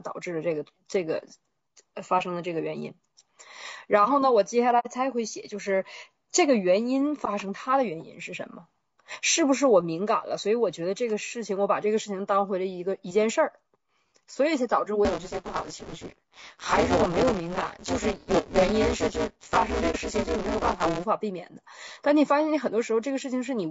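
A speech recording with a rough, grainy sound all the way through: noise sits between the harmonics and the top end sounds thin and synthetic. That's most likely low-delay AAC compression (AAC-ELD) at a low bitrate, something around 32 kbps, where there are too few bits to code the spectrum cleanly. There's AAC frame loss with muting at 4.79 s and again at 19.91 s. The decoder zeroed the missing frames, so you get soft-edged dropouts of about 60 ms and 30 ms that fade out and back in. From 15.05 s to 21.05 s there's buffer tearing. The writer and reader of the ring buffer have slipped, so roughly half of each buffer replays audio about 20 ms old, with hard joins either side. It comes across as a robotic 172 Hz buzz riding on the signal, which fits a 256-sample buffer.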